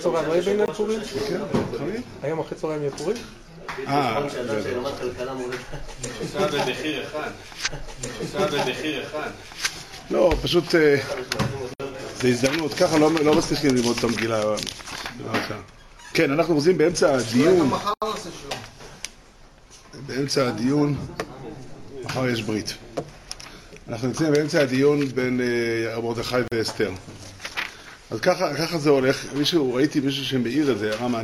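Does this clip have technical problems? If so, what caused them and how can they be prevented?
Yes, there are two kinds of problem. The first is a block of digital silence, heard four times as a sudden hole in the sound: 0.66 to 0.68 s (20 ms, close to a tick), 11.74 to 11.80 s (60 ms), 17.94 to 18.02 s (80 ms) and 26.48 to 26.52 s (40 ms). The signal drops straight to silence and returns with no fade. This happens when the playback or processing code fails to fill its output buffer in time, and the empty buffer is sent out as zeros. To prevent it, give the audio thread enough buffer headroom and priority that it never misses a deadline.

The second is a stream segment repeated. At 7.62 s there is a small blip as playback jumps back, and the preceding stretch of sound plays again, running to 9.62 s and adding about 2.0 s to the programme. The player fetched or queued the same segment twice, so the audio it had already played was handed to the output a second time. 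To prevent it, the player should track segment sequence numbers or timestamps and discard any segment it has already queued.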